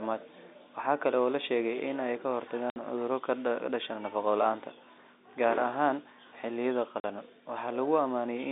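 At 2.70 s the speech drops out for 60 ms, and at 7.00 s for 40 ms. This is packet loss filled with silence. Missing audio was replaced by nothing. Both gaps fit 20 ms packets. Each hole starts and ends abruptly, over a telephone-band sound.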